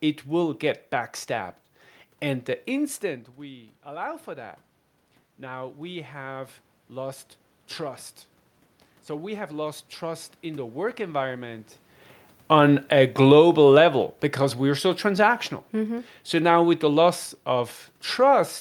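From 5.38 to 8.08 s, the speech level falls by about 15 dB, and automatic gain rising sets in. The control hears the quieter input and lifts its gain by about 3 dB over nearly three seconds, so the voice and the room noise swell together. The same slow rise returns from 9.07 to 11.72 s, again by about 3 dB. That shared swell of voice and background is what separates it from the talker shifting position near 3.0 s and 11.5 s, where only the voice changes and the room noise stays put.

Automatic gain falling follows from 12.39 to 14.04 s, just before "because we're so transactional". Having found the input too loud or its background noise too strong, the control eases its gain down by about 3 dB over roughly 1.7 s, and the speech and room noise sink in step. A talker leaning away would lower only the voice, and a sudden level drop would be abrupt rather than this gradual slide.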